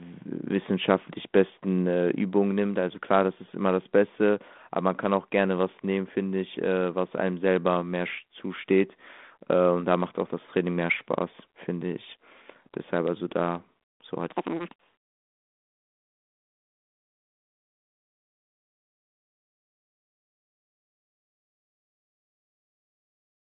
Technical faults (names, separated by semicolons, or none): section at the wrong speed